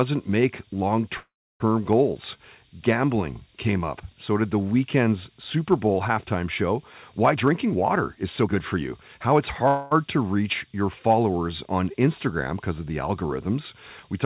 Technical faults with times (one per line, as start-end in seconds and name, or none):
1.18-1.62 call audio freeze
7.35-8.77 jitter buffer speed-up
9.68-9.93 call audio freeze